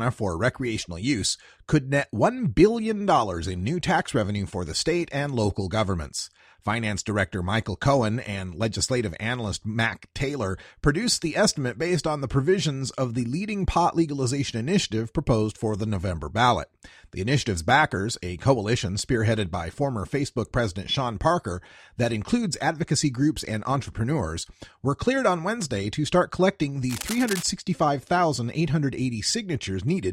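A worn cable, connector or control was likely moved during recording, making its contact resistance jump about erratically for roughly half a second. From 26.89 s to 27.43 s this cable scratch noise lays dense, irregular bursts of crackle over the speech, sitting only around 10 dB below it, so the scratching and rustling is heard on top of the voice until the contact settles and the noise stops.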